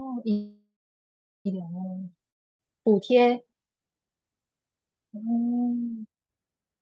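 From 0.31 to 1.47 s there is a call audio freeze. The last sound fades, then about 0.77 s of silence. The speech resumes intact, likely after delayed packets arrived.

At 2.30 s a long network dropout hits. A brief fading tail gives way to silence until 2.62 s. Roughly 0.3 s of speech is gone, likely lost in transit.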